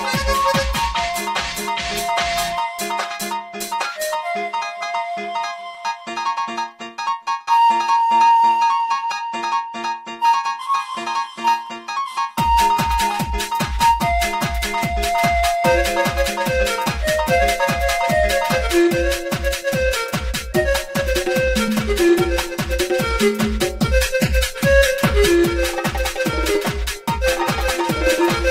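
Throughout the clip, one channel arrives roughly 5 ms behind the other before the two are summed to mono, causing channel delay (comb filtering). Shared content cancels at evenly spaced frequencies starting near 100 Hz, leaving fixed notches that make the sound hollow and phasey.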